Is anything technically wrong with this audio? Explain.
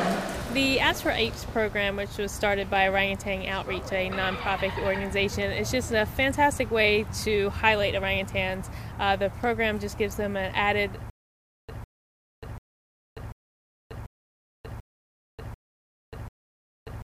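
Yes. From 11.1 s to the end, a stutter with silent gaps: the same 154 ms fragment repeats 8 times, each followed by about 587 ms of digital silence, every 740 ms. This is likely a stalled stream replaying its last buffer on each retry. Unlike a dropout, the same fragment returns at an even pace.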